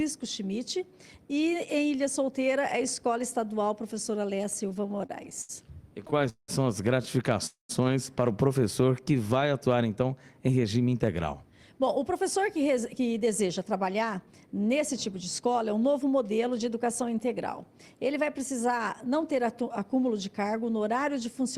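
From 4.69 to 5.51 s and 5.89 to 6.50 s, repeated stalls (stutter) chop the audio into 11, then 7 gaps, the longest 188 ms. Late packets emptied the jitter buffer, and repeated frames show as stretched, smeared columns on a spectrogram.

At 7.46 to 7.71 s a call audio freeze holds the last sound briefly, then drops to about 120 ms of flat waveform, likely from delayed packets draining the buffer.

From 8.82 to 9.24 s a jitter buffer slow-down plays at 87% speed, adding 60 ms. Repeated pitch periods appear as unchanged harmonics drawn out in time.

From 10.93 to 15.42 s a jitter buffer speed-up runs at 108% speed, removing roughly 0.4 s. The audio sounds hurried at unchanged pitch, with events packed closer on the time axis.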